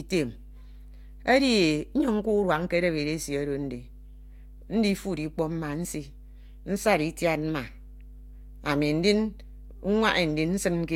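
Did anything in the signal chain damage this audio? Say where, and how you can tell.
Yes. The analogue wiring let in mains hum. A steady 50 Hz tone runs under the speech for the whole clip, roughly 20 dB below it. A ground loop or a nearby transformer has coupled the power line into the signal path.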